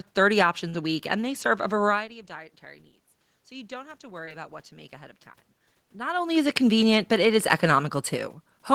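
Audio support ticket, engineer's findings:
Short concealed packet loss, 0.69 to 0.76 s, just before "a week and they", and 4.26 to 4.29 s. Receiver jitter buffer/decoder concealment extrapolated about 40 ms and 20 ms of missing speech. Brief smear. Spectrogram shows a smoothed fill, then a crossfade back.

Automatic gain rising, 3.48 to 5.23 s, after "variety of dietary needs". Input level dropped about 18 dB, so the AGC stage ramped gain up about 4 dB over roughly 1.75 s. The waveform envelope and the room noise floor climb together, with no step.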